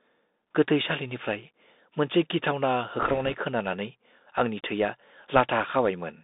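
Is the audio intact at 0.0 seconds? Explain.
No. From the very start and throughout, the speech sounds narrow and muffled, with scratchy s sounds and a granular hiss beneath it. This is the Bluetooth CVSD headset codec: one-bit up-or-down steps, consistent with a 64 kbps link, confine the sound to roughly 200 Hz to 3.7 kHz.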